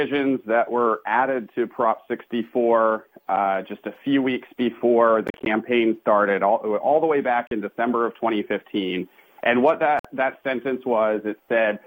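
Between 5.27 and 5.46 s the sound breaks into several short silences totalling about 107 ms, the longest 40 ms; single holes follow at 7.47 s (40 ms) and 9.99 s (53 ms). These are a likely Bluetooth dropout: unlike a stall, playback resumes further on, with the missing sound gone.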